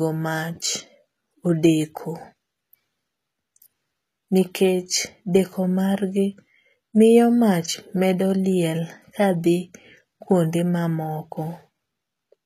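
Speech throughout, and the whole clip carries plainly audible HE-AAC compression damage, likely from a low bitrate around 20 kbps. The treble is rebuilt by copying lower bands upward, so the s sounds come out gritty and metallic, and nothing at all survives above about 14.9 kHz.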